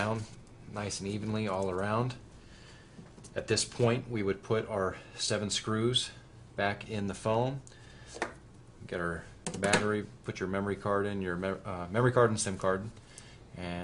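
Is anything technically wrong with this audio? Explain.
No, there is nothing technically wrong with this audio.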